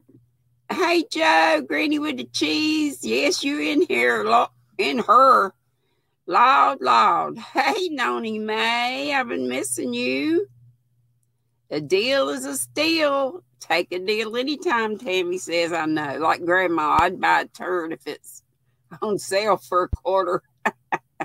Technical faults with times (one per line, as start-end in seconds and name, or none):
16.99-17.02 loud pop
19.93-19.96 loud pop